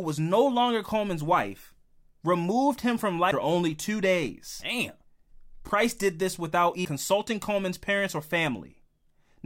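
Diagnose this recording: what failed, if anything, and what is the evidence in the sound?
A CD skip during playback: the laser jumped to another turn of the spiral, giving a tick, a momentary mute and a jump at 3.31 s, after "wife removed him from", and 6.85 s, after "did this without".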